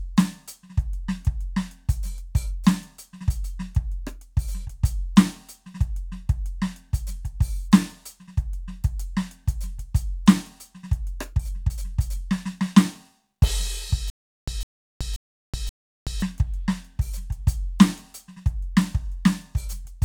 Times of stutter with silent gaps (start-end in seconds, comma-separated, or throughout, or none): 14.10-16.22